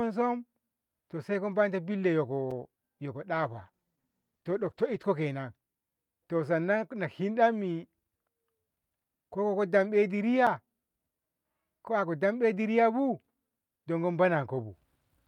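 At 2.51 s and again at 10.47 s, a block of digital silence replaced the speech. Each 5.8 ms gap, which fits a 256-sample buffer, cuts in abruptly and is heard as a sharp tick. From 3.35 s to 5.11 s, a call bitrate drop forced coarser encoding, consistent with a fall from about 64 to 14 kbps. The speech turns rough and muffled, worst for about 1.7 s, before clarity returns.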